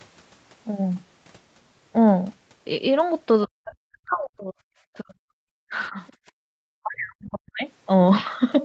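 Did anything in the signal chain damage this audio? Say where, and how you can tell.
Yes. The damage happened in the call processing stage, specifically in echo control. The speech is cut four times: 3.46 to 4.57 s, 5.00 to 5.47 s, 5.69 to 5.97 s and 6.41 to 7.65 s. The deepest drops are about 40 dB, and the 5.69 s dip is shallower at about 15 dB. This is most likely speech suppressed in double talk, where the echo canceller turns down the microphone while the far side is talking. Codec dropouts or packet loss would sound different. They produce short, irregular gaps with concealment artefacts. These dips are long gain reductions that follow another talker.

The other side's voice leaking through also shows up, as a brief scrap from 6.07 to 6.13 s. It sits about 35 dB below the speech, in the gap between two suppressed stretches. The likely cause is echo from the loudspeaker that the canceller did not fully remove from the microphone. 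The overall band limit, with nothing above 8 kHz, comes from the Opus call path and is not part of this fault.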